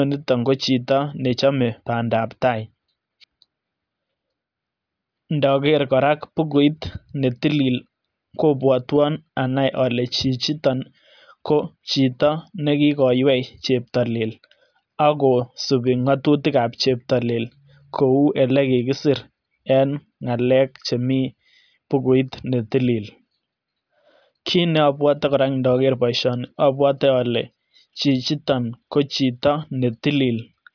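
Speech recording; no technical faults detected anywhere in the clip.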